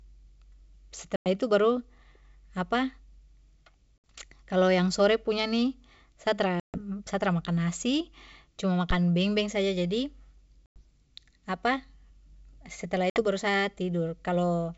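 Speech with packet loss on an ADPCM call: silent holes of 100, 60, 140, 100 and 60 ms at 1.16, 3.98, 6.60, 10.66 and 13.10 s. Unlike a plain dropout, each return is slightly distorted before settling, as the decoder's predictor resynchronises. The wideband G.722 coding itself sounds clean.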